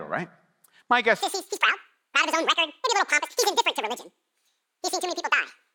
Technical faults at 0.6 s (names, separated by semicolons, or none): none